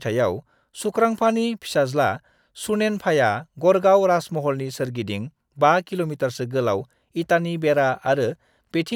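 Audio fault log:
No audible faults detected in the speech signal.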